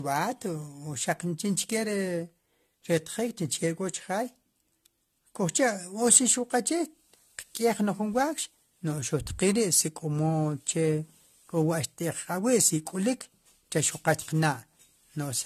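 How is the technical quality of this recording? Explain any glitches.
The quality is degraded throughout the recording by generation loss. The speech sounds swirly, smeared and hollow, consonant attacks blur, and nothing is present above 14.2 kHz. The likely cause is about five successive AAC-LC encodes at 64 kbit/s. Each pass requantises on a shifted frame grid, so noise and spectral holes accumulate.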